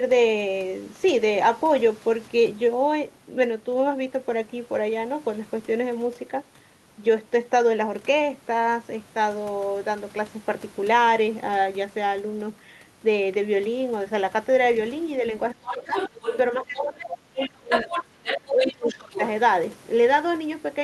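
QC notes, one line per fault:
15.52–15.96 s: speech suppressed in double talk. The echo canceller likely mistook overlapping talk for echo and ducked everything, so the talker dips by about 25 dB.
15.66–16.38 s: other side's voice leaking through. Residual loudspeaker echo was likely left in the microphone path, so a second voice sits roughly 10 dB under the talker.
16.58–19.18 s: speech suppressed in double talk. Overlapping talk likely drove the canceller into heavy suppression again, chopping the talker's speech by up to about 30 dB for around two seconds.
16.76–16.82 s, 17.00–17.06 s, 17.39–17.49 s, 17.69–18.04 s, 18.25–19.26 s: other side's voice leaking through. Incomplete echo removal likely let far-end scraps through, some nearly as loud as the talker.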